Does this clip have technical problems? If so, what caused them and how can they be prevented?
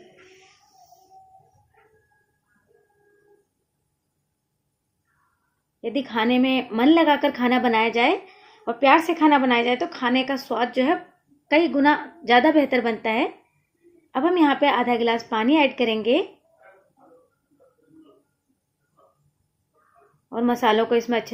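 No, there are no technical problems to address here.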